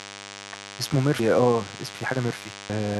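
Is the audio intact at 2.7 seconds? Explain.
No. At 2.70 s there is a splice where audio missing between chunks has removed roughly a third of a second of speech. The two sides are butted together with no silence, so the sound jumps forward abruptly instead of pausing. That distinguishes it from a dropout, which leaves an audible gap of silence. The cause is likely a processor working in one-second chunks that lost material while closing one block and opening the next.

At the same moment, a DECT cordless phone buzz runs underneath, as it does for the whole clip. A nearby handset or base transmits a radio burst every 10 ms, and the audio circuitry rectifies it into a thin, rasping buzz at 100 Hz sitting around 15 dB below the speech. Its dense stack of harmonics makes it sound edgy and buzzy. That separates it from mains hum, which is a smoother, rounder tone at 50 or 60 Hz.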